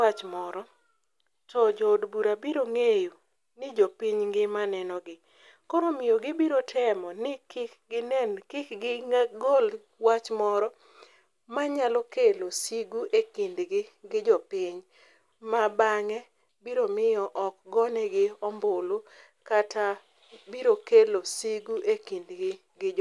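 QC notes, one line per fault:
No fault found; the QC notes for this speech recording have nothing to list.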